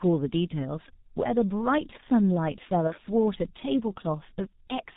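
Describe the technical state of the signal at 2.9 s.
A packet was lost between 2.87 and 2.94 s, about 30 ms of audio, consistent with one G.723.1 frame. This is VoIP packet loss concealed by the speech codec: the decoder fills the gap by extending its last pitch and filter state at falling gain, so the sound smears into a brief buzzy tone or coloured noise that fades, and stays weak or distorted just after the gap. Throughout, the G.723.1 codec, at a rate consistent with about 6.3 kbit/s, coarsely models the signal in 30 ms frames and discards everything above 4 kHz, leaving the speech muffled and hoarse with blurred consonants.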